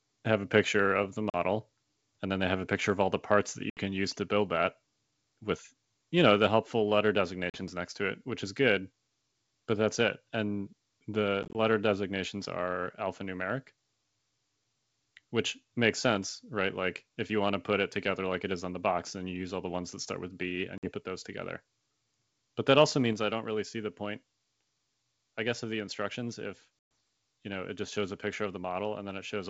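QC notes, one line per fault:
1.30–1.36, 3.70–3.80, 7.50–7.60, 11.43–11.55, 20.78–20.91 and 26.79–26.91 s: packet loss on an ADPCM call. Between 40 and 120 ms of sound drops to hard-edged silence. At 11.43 s the loss is broken up, with 70 ms lost over 120 ms in runs of up to 20 ms. The decoder's adaptive predictor and step size lose track of the sender's, so the G.722 wideband audio comes back at the wrong level or with a click and some distortion, then settles within tens of milliseconds.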